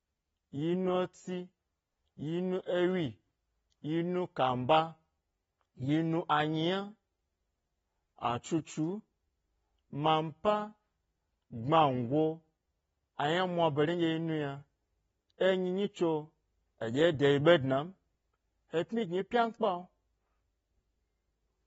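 From the very start and all the way through, the speech has that dull, smeared quality you get from AAC compression, most likely AAC-LC at a low bitrate, with a sound that fits something around 24 kbps. Nothing survives above about 7.6 kHz because the encoder dropped its cut-off to save bits, so sibilants lose their edge and sustained sounds pick up a fizzy, warbling texture. The damage is plainly audible, not subtle.

At 15.38 s there's a brief pre-echo running to about 15.41 s, roughly 29 ms of hiss arriving just ahead of a sharp attack. The codec spreads its quantisation noise across the whole transform block, so noise scaled for the loud onset also spills into the quiet stretch before it. You hear a smear or whisper leading into the hit, and the attack itself comes across softer than it should.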